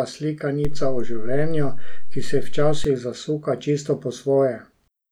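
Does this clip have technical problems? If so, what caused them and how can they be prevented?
Yes. A DC step at 0.65 s shifts the waveform's zero line by about -15 dBFS, giving a low thump. The trace stays displaced until 2.85 s, just before "zasuka čisto", then drops back with another thump. A spectrogram shows brief low-frequency bursts at both edges. A converter recalibrating or an input with an offset being switched in shifts the baseline this way. A DC-blocking high-pass filter and muting the path during input switching would prevent it.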